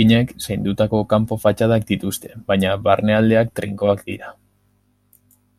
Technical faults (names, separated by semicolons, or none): channel delay (comb filtering)